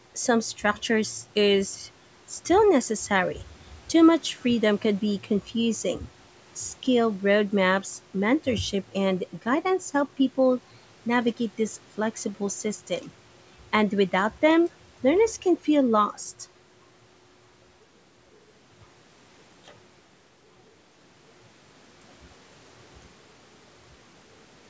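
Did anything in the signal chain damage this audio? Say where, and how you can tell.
No, the signal chain left this speech intact: the band stops at 8 kHz and the lowest bass is trimmed, both normal for a call's microphone processing, with nothing in the signal pointing to damage at any stage.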